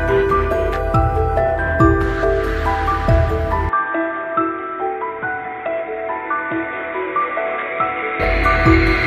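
From 3.69 s to 8.2 s the audio abruptly turns dull and boxy, then clears again, which points to the input likely being switched to a poorer device, such as a headset's call profile. Nothing above 3.8 kHz survives in that stretch, so a spectrogram shows the upper band cut off flat at that line. The waveform drops roughly 5 dB, a faint new noise floor appears far below the signal, and there is no gap at either switch.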